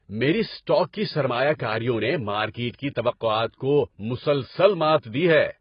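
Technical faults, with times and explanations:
Throughout, AAC compression: the speech sounds dull and smeared, with nothing above 5 kHz and a warbling, fizzy texture on sibilants and held vowels. The likely cause is heavy AAC-LC quantisation at a bitrate around 16 kbps. A simple low-pass filter would not add that churning texture.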